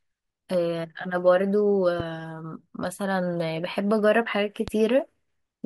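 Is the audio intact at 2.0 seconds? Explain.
No. A loud pop hits from 2.00 to 2.03 s, a single sharp thump roughly 5 dB above the speech, likely from a voltage step or static discharge, with speech continuing underneath.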